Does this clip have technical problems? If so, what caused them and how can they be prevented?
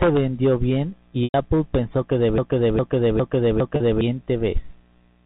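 Yes. Just after "vendió bien", from 1.24 to 1.34 s, there is packet loss with pitch repetition: about 100 ms went missing, which fits five 20 ms packets. A second, 40 ms gap comes at 3.76 to 3.80 s. In both places the receiver bridges the gap by repeating the last pitch period and fading it. At the short gap this gives a brief held, buzzy tone, while the longer gap fades into silence before the speech returns. Unlike a broken-record loop, it repeats one tiny cycle rather than a recognisable chunk of sound. Prevention: use a jitter buffer with forward error correction or redundant packets on the link.

From 2.38 to 4.01 s there is a broken-record loop. A 0.41 s fragment plays four times back to back, identical each time, and the audio for that stretch is lost. This was likely caused by a stalled player, encoder or stream resending its last buffer. Unlike concealment, it repeats a whole recognisable fragment rather than one pitch cycle. 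Prevention: add watchdogs that detect the stall and output silence or resynchronise instead of resending stale data.

The band-limited telephone sound of the G.711 coding is part of the transmission as expected.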